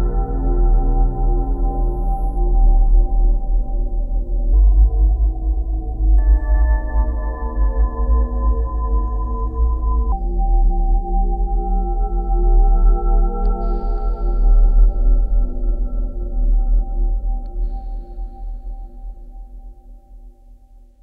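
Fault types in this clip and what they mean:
Section at the wrong speed, 4.53 to 10.12 s: this stretch plays 1.29 times faster than recorded, so pitch rises by about four semitones and the sound turns bright and hurried, likely from that portion being run against the wrong clock.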